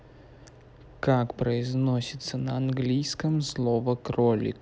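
No technical faults can be heard anywhere in the speech. There is nothing in the recording that calls for a timed description.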